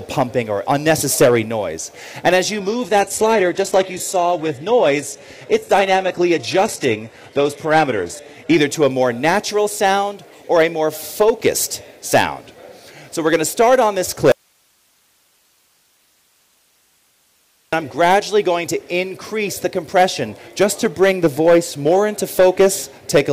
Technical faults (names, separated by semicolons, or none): hard clipping; adaptive stream at a lower bitrate; audio dropout to a faint residue